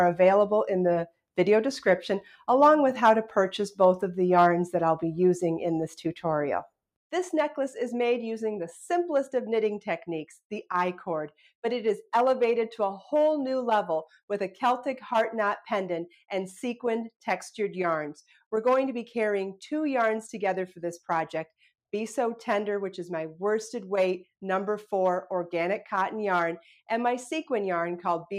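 No technical faults can be heard anywhere in this recording.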